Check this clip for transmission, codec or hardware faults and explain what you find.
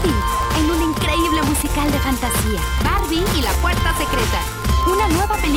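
One hardware fault runs through the whole clip: Wi-Fi interference. A steady, dry ticking sits under the sound from start to finish, about ten clicks a second, spaced 102.4 ms apart and roughly 20 dB below the wanted audio. That spacing matches the beacon interval of a Wi-Fi radio. Each beacon burst is picked up by nearby audio circuitry, rectified into the signal path and heard as a click.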